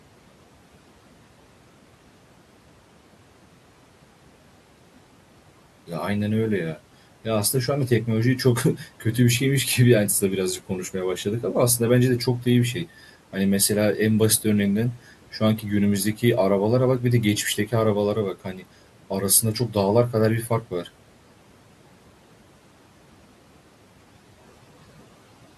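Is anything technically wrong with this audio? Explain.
Yes, the noise suppressor bites into the speech three times: 8.77 to 9.04 s, 18.34 to 18.64 s, and 20.48 to 20.86 s. Its gain control mistakes stretches of low-level speech for the room noise sitting about 22 dB below the voice and pulls them down with it. That's about 8 dB at the first spot, 12 dB at the second and 9 dB at the third, lasting around a tenth of a second at the first and third and about 0.15 s at the second, which leaves those bits sounding swallowed and faint.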